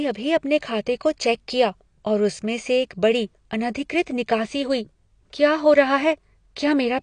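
Throughout, the speech is dull, smeared and fizzy, with nothing above 9.8 kHz, likely AAC compression at a low bitrate, fitting roughly 32 kbps.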